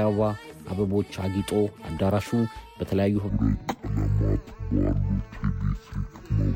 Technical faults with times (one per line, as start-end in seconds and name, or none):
3.29-6.56 stereo read as mono